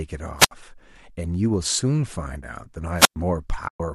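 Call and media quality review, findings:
Wireless mic squelch dropout at 0.38–0.51 s and 2.96–3.16 s: hiss swells as the RF fades, the receiver mutes for roughly 67 ms then 110 ms, and the sound comes back.

AAC frame loss with muting at 3.68–3.80 s: a soft-faded 120 ms hole, consistent with about a dozen short frames of the likely AAC-ELD stream being zeroed by the decoder.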